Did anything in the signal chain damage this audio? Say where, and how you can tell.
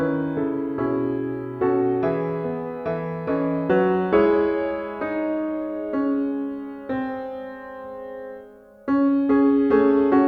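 No, nothing in the signal chain stood out as damaging this audio on listening.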